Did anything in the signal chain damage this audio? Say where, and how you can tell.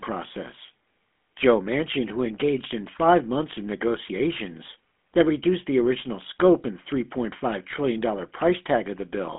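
Yes: the GSM full-rate codec has plainly damaged the speech throughout. It band-limits the line to about 200 Hz to 3.5 kHz, with nothing above 3.7 kHz. Its pulse-excited vocal-tract model leaves a buzzy, gravelly roughness, which fits a 13 kbps stream.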